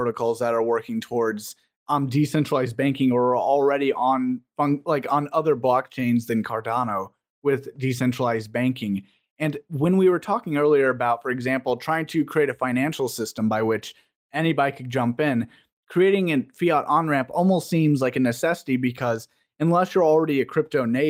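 Nothing stood out as a technical fault on listening to the recording.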